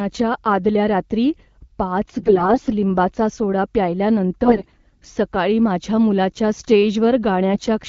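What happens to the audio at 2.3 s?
At 2.3 s there are AMR bit errors, from 2.18 to 2.70 s, between "आदल्या रात्री पाच" and "लिंबाचा सोडा". Roughly a tenth of the weakly protected bits arrive flipped. Misplaced pulses and skewed pitch, gain and spectrum values make the speech hoarse, scratchy and gargly, at about its usual pitch and level.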